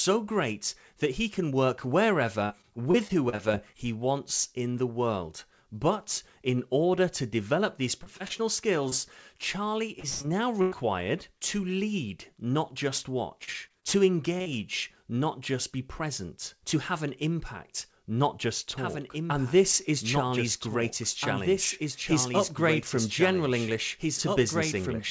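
Repeated packet loss (robotic sound) hits four stretches: 2.46–3.75 s, ending just before "he wants in the"; 8.03–8.94 s, after "order to develop these"; 9.99–10.74 s; and 13.44–14.47 s, after "to lead not just". Each gap is filled by extending the previous sound, leaving choppy speech with pieces missing. The 9.99 s burst is worst, with about a third concealed and one gap of 109 ms.

From 18.78 s to the end, a doubled audio track appears: an abrupt, dry copy about 5 dB down, trailing by roughly two seconds. It is likely a second capture through a slower path.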